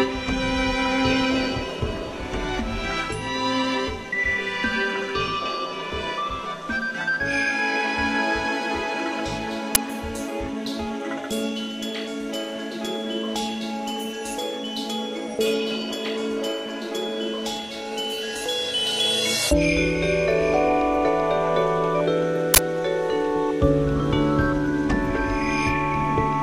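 Uninitialised buffer bursts at 9.75 s and 22.54–22.58 s: blocks of about 10 ms and 40 ms played before being filled, so leftover memory sounded as loud digital noise.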